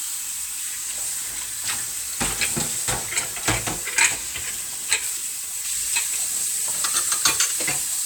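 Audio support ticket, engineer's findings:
Nothing stood out on listening; no findings to log against this clip.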